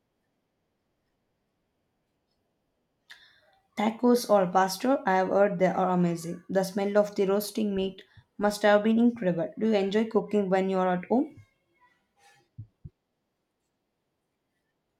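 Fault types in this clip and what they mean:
No technical faults can be heard in the recording.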